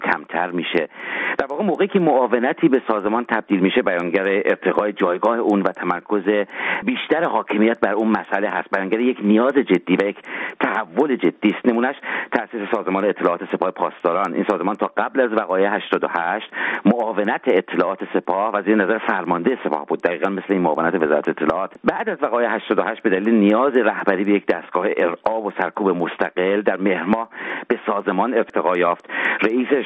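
Throughout, the resampler restarted on every block, converting each 250 ms block in isolation, which fits a change from 24 kHz to 16 kHz. Each block edge lacks its real neighbouring samples, leaving a regular tick at 4 Hz, heard only while sound plays.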